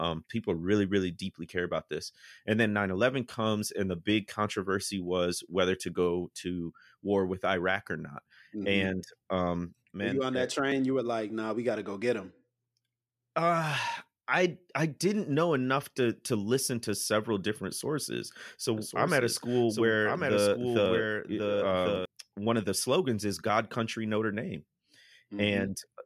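A speech clip with a doubled audio track from 18.77 to 22.05 s, starting right after "to several different sources" and stopping just before "one of the slogans". A second full-band copy of the speech trails the original by about a second, sitting roughly 5 dB down, with no reverb tail or room colour, and it cuts in and out abruptly. That likely comes from the signal being picked up twice through a slower path, or an edit leaving two copies out of step.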